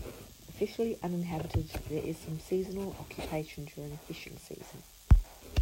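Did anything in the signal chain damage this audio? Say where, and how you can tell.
No, nothing audible in this speech points to damage at any stage of the chain.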